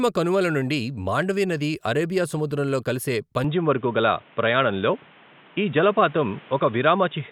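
At 3.44 s, right after "నది అరేబియా సముద్రంలో కలిసే", the speech abruptly turns dull and boxy and stays that way to the end. Nothing is heard above 3.8 kHz from that point. There is no gap at the change, and the loudness stays about the same. A faint new background noise appears, well below the speech. The likely cause is an input switched to a poorer device, such as a narrower-band microphone or a headset's call profile.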